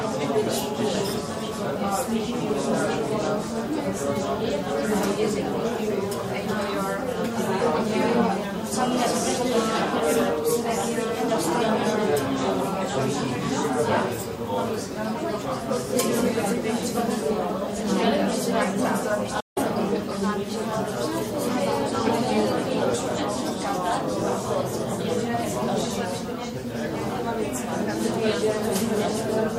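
A recording of sounds with one digital broadcast dropout from 19.40 s to 19.58 s. The audio fades out over about 8 ms, leaving a silent hole of roughly 160 ms before the sound resumes, with whatever occurred during the gap lost. A short mute like this is what a receiver produces when it loses the digital signal or rejects corrupted frames. The length fits about five dropped frames of roughly 32 ms each.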